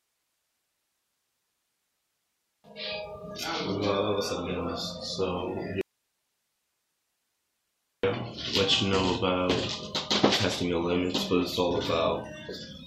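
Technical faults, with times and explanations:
5.81 to 8.03 s, audio dropout to a faint residue: the signal vanishes abruptly for 2.22 s and only hiss remains, roughly 50 dB below the normal level, before it snaps back just as suddenly. The cause is likely a break in the source while the downstream path stayed live. On a waveform the envelope collapses to a thin flat band with square edges. On a spectrogram the content is replaced by an even, faint broadband wash.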